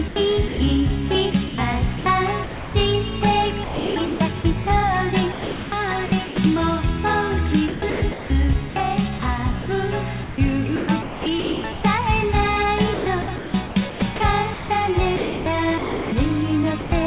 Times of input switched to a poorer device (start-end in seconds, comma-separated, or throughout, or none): none